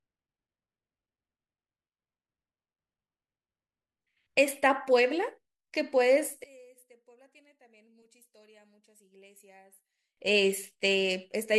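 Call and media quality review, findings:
0.0 to 4.0 s: speech dull, treble missing, swirly codec artefacts, then sudden clean step up with no gap. Adaptive stream starting at a low bitrate. The player opened on a low rung, consistent with AAC-LC near 16 kbit/s, and moved to roughly 96 kbit/s once throughput was measured.

6.44 to 10.17 s: centred speech nearly vanishes, about 29 dB down, leaving a faint residue. Likely one channel inverted. With polarity reversed on one side, the mono sum cancels the shared centre, leaving only the inter-channel difference.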